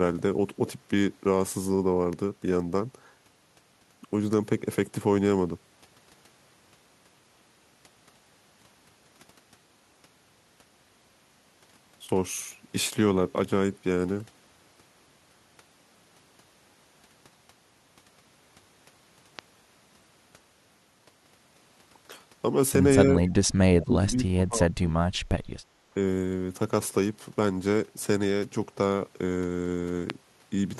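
At 19.39 to 19.41 s a single sharp pop cuts in, standing roughly 10 dB above the speech, which carries on underneath it. The same kind of loud pop returns at 30.10 to 30.12 s, even harder at roughly 15 dB over the speech. Each is a brief spike with the speech continuing beneath. The likely cause is a sudden voltage step or pulse, from a plug, switch, static or driver glitch, entering the signal path.

Between 23.24 and 23.33 s a faint, delayed copy of speech slips through, lagging by 231 ms and sitting roughly 30 dB below the main level. This is an echo leak. The far end was most likely playing the call over a loudspeaker, and its echo canceller failed to remove everything the microphone picked up, so a residue was sent back.

From 23.58 to 24.99 s the talker's speech sags and breaks up in pieces, falling by as much as roughly 30 dB across about a second and a half. This is speech suppressed in double talk. 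With both sides talking at once, the echo canceller likely could not separate the local talker from the loudspeaker echo, so it attenuated both and carved holes in the speech.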